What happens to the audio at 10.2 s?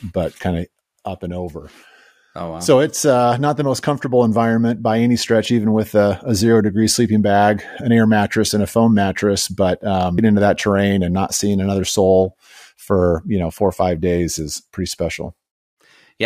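A stream segment was likely skipped: one chunk of the segmented stream failed to load, and the player moved straight on to the next. At 10.17 s the speech jumps ahead with a small blip, resuming at "into that terrain and", with the intervening programme lost.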